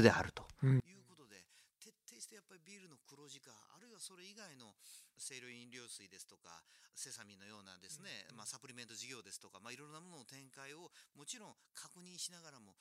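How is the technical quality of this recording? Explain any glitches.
The recording has one serious fault. One channel inverted, from 0.80 s to the end: the speech falls about 27 dB, faint, likely from reversed polarity on one channel cancelling centred content when summed to mono.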